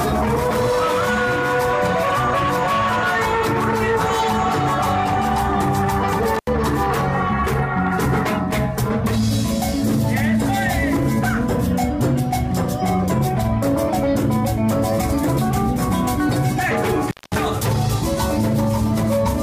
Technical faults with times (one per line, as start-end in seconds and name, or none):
6.35-6.48 intermittent contact
17.08-17.35 intermittent contact